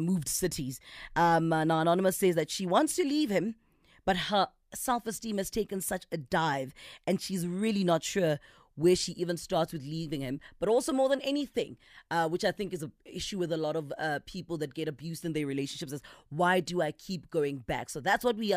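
No technical faults are audible anywhere here.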